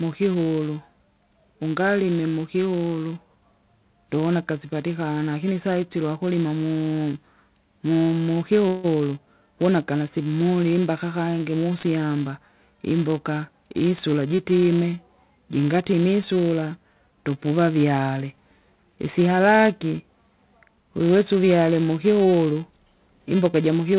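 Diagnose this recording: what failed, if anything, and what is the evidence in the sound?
In the processing stage, a filter is restarted on every block, discarding its state and starting each block from silence. Each block opens with a small transient, heard throughout the speech as a 375 Hz buzz that rises and falls with the level. That rate fits a 128-sample block at 48 kHz.

At the network and jitter buffer, packets were likely held up in transit, producing a call audio freeze from 8.68 to 8.86 s. The receiver carried the last sound on as a fading buzz or hiss for about 157 ms. The band-limited speech, with nothing above 4 kHz, then resumed where it stopped, delayed rather than lost.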